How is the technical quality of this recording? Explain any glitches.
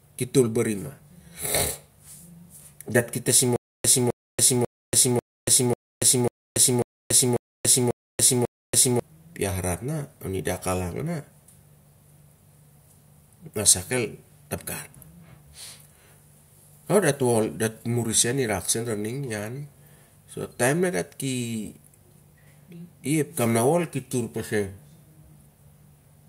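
The recording has one clear glitch. From 3.56 to 9.0 s, a stutter with silent gaps: a 260 ms speech fragment repeats 10 times, each followed by 284 ms of digital silence, likely from a stalled stream replaying its last buffer. The waveform shows identical blocks separated by flat silent stretches, and the spectrogram shows matching stripes with blank gaps between them.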